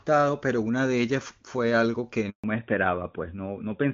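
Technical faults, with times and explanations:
2.30–2.44 s, handover gap: the speech dies away within a few tens of milliseconds and stays silent for 140 ms before resuming. The call was passed between networks, and no speech frames arrived during the switch, so anything said then is lost.
2.44 s to the end, fallback to narrowband: when the speech returns, nothing above 4 kHz remains, and it sounds duller and rougher than before. The call dropped from clean HD Voice wideband coding to an older narrowband codec, likely AMR-NB at its top rate.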